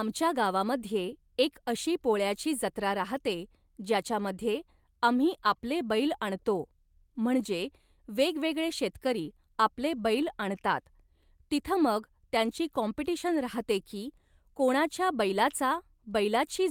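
From 13.27 to 13.45 s comes a lost packet rebuilt from error correction, a stretch that fits around five packets replaced by low-bitrate backup copies. The speech carries straight through but turns rougher and noisier; unlike plain concealment, there is no gap, fade or smeared repetition.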